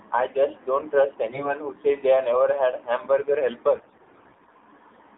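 AMR narrowband mobile codec, heard across the whole clip: the speech passes through the narrowband mobile speech codec, which keeps only a telephone band from about 250 Hz to 3.7 kHz, so there is no air or sibilant sparkle. The codec rebuilds the voice from a vocal-tract filter excited by a handful of pulses per subframe. The plainly audible buzzy, synthetic edge points to a low AMR-NB mode of about 7.4 kbps.

AMR bit errors, from 1.32 to 1.55 s and again from 3.76 to 4.53 s: the weak link flipped around one bit in ten in the less protected part of each frame, while the checks on the core bits still passed, so the decoder accepted the damaged frames. Their excitation pulses fall in the wrong positions, and the finer pitch, gain and spectral values drift. Pitch and loudness hold roughly steady, but the voice turns hoarse, scratchy and gargly, briefly in the first stretch and for most of a second in the second.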